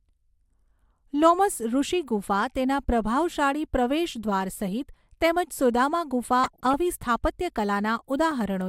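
Speech clip with DAB burbling from 6.44 to 6.74 s, right after "સહિત તેમજ સુદામા ગુફા": short noise blips in single sub-bands from weak-reception bit errors, under one percent, corrupting the MP2 audio frames.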